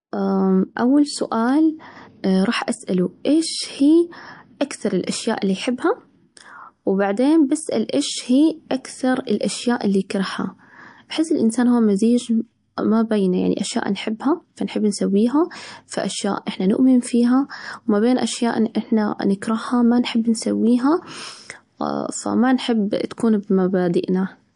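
Throughout the speech, the sound has a watery, swirling quality, and nothing comes through above 10.6 kHz. This is likely MP3 compression at a low bitrate, around 53 kbps, where weak frequency lines flicker in and out between frames. A simple low-pass filter would dull the treble without that swirl.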